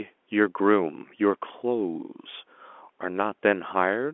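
Nothing stood out on listening to this speech recording, which carries the narrow, bass-light band of an ordinary telephone line.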